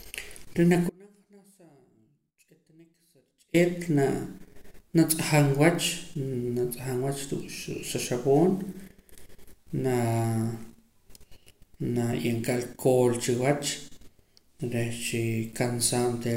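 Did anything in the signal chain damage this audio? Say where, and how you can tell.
Yes: an audio dropout to a faint residue, likely a break in the analogue wiring, abruptly cuts the speech from 0.90 to 3.54 s, leaving faint sound about 35 dB down.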